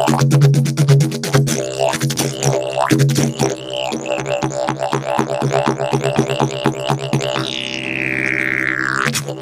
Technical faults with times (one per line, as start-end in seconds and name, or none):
2.16 dropped buffer (overrun)
7.13 dropped buffer (overrun)